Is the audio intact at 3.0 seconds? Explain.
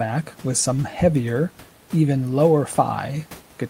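Yes, the audio is intact at 3.0 seconds: there is only the room noise about 28 dB beneath the speech, which belongs to the recording space rather than to any fault.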